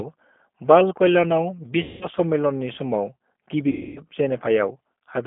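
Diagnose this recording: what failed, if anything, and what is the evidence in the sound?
The codec stage shows G.729 coding throughout. Audio is confined to 200 Hz to 3.4 kHz and sounds rough and synthetic, which fits an 8 kbit/s G.729A stream.

At the network stage there was VoIP packet loss concealed by the speech codec, at 1.83 to 2.06 s and 3.69 to 4.02 s. The decoder extrapolated from its last pitch and filter with falling gain, covering about 180 ms and 270 ms of lost audio.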